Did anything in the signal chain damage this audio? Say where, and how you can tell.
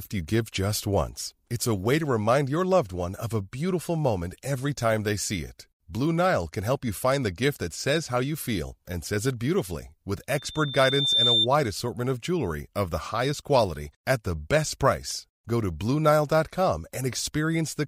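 Yes. There's loudspeaker feedback squeal from about 10.38 to 11.47 s, just before "assortment of jewelry of". It's a single tone near 3.6 kHz that swells over the better part of a second until it sits about 5 dB above the speech. This happens in the analogue stage, acoustically, before the converter. The mic was hearing the loudspeaker it fed, and at 3.6 kHz the loop gain went past one, so that frequency kept feeding itself and growing.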